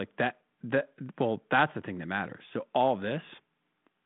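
No faults: the speech runs over a 32 kbit/s G.726 ADPCM link with a 150 Hz to 3.6 kHz telephone band, nothing above 3.8 kHz, and the light coding roughness that path normally leaves.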